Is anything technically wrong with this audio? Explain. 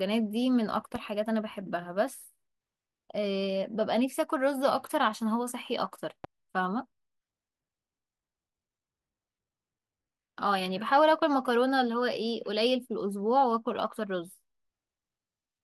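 Yes, there are two faults of the same kind. A loud pop occurs at 0.96 to 0.98 s and again at 6.24 to 6.27 s. Each is a single sharp click peaking a few decibels above the speech, which carries on underneath. The likely cause is a brief voltage step, from static or a switching glitch, being added to the signal and shaped by the circuitry that follows it.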